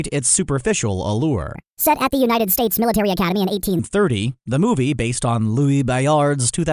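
Wrong sample rate from 1.55 s to 3.79 s, right after "its superficial", makes this speech clip suddenly run fast and high. The samples in that span are played back at a higher rate than they were captured, with no conversion, so speed and pitch rise together: the sound runs 1.45 times faster and about 6.45 semitones higher. That ratio fits audio recorded near 22 kHz being played out at 32 kHz.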